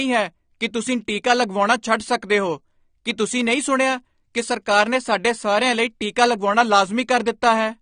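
AAC compression, throughout the speech: nothing above 9.7 kHz, dull and smeared with fizzy sibilants, likely from AAC-LC coding at a low bitrate near 32 kbps.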